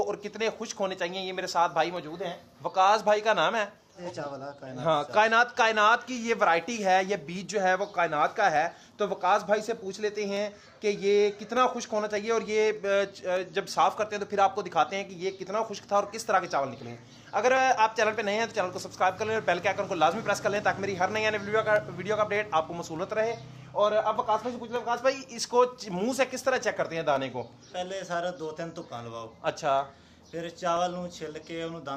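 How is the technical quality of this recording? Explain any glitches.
The recording has one recurring fault, clock drift buffer slips, running from 0.16 s to the end. Two devices in the chain were likely running on separate clocks that disagreed by roughly 300 parts per million, so the buffer between them kept drifting until a handful of samples, around seven, was dropped or repeated. That correction happens every 0.6 s, about fifty times in all, and each one is heard as a regular click or pop wherever there is signal.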